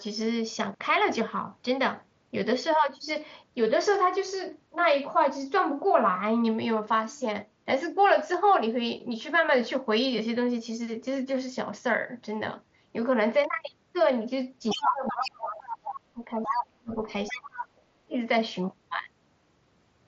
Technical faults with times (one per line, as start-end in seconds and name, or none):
14.70-14.82 other side's voice leaking through
14.74-17.07 speech suppressed in double talk
15.07-15.31 other side's voice leaking through
15.62-16.00 other side's voice leaking through
16.43-16.64 other side's voice leaking through
17.28-17.42 other side's voice leaking through
17.32-18.17 speech suppressed in double talk